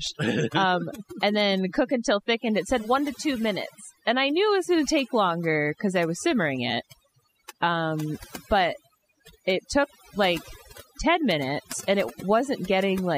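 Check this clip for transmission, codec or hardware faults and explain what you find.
One fault runs through the whole speech clip: overdone noise removal. A noise reducer was set too strong. It pushes frequency bands far down or off when they sit near its noise estimate. Quiet parts of speech vanish with them. The background drops and breaks into twinkling, warbling specks.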